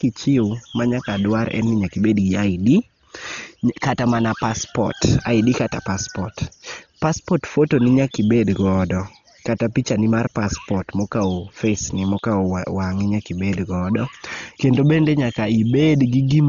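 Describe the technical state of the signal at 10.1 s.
At 10.1 s the speech shows heavy coding damage that runs through the whole clip, likely from Dolby Digital compression. Nothing is left above 6.9 kHz, so the sound is dull, and tonal parts carry a rough, fluttering noise where lines starved of bits were filled with dither noise. That filler noise sets it apart from a plain low-pass filter, which would dull the sound without the flutter. The damage fits a very low bitrate near 32 kbps.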